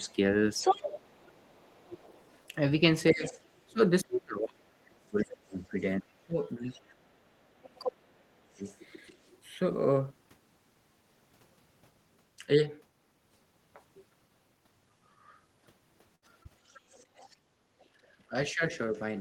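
From 0.0 to 1.54 s, and again at 3.11–6.39 s and 7.93–8.62 s, the talker's speech is suppressed in double talk: it dips by as much as roughly 35 dB in pieces, likely because the echo canceller turned everything down while both sides spoke. Unlike a network dropout, nothing is smeared or held. Throughout 0.07–9.31 s the other side's voice leaks through, likely as residual loudspeaker echo about 15 dB under the talker, a second voice rather than a gap. At 16.15–16.24 s a burst of packet loss leaves about 60 ms missing. The last sound is stretched and faded for about 66 ms before the speech jumps ahead, which is longer than the short concealed packet loss at 16.43–16.47 s, a brief smear of about 18 ms over a 20 ms hole. From 16.69 to 19.0 s the other side leaks through again, likely from the loudspeaker, now faint at about 30 dB down. At 17.46–17.57 s the background is gated by the echo canceller, and the room sound drops by about 21 dB for roughly a tenth of a second. 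At 18.29–18.95 s speech is suppressed in double talk once more, a shallower dip of about 15 dB, likely the canceller ducking both voices.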